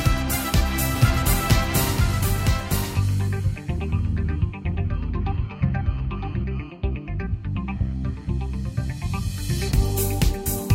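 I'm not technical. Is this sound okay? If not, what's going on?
No. The sound was likely captured twice, creating a doubled audio track. From 0.96 to 6.44 s, a quieter copy trails one second behind, starting and stopping abruptly.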